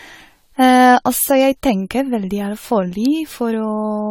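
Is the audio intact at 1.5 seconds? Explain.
No, generation loss runs through the whole clip: likely repeated AAC-LC encoding, around seven passes, leaving swirly, hollow speech, a spectrogram pocked with holes and empty above 19.4 kHz.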